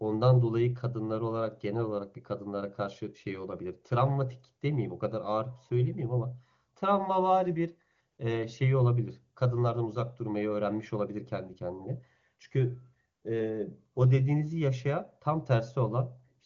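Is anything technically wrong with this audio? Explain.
No, nothing technically wrong is audible here.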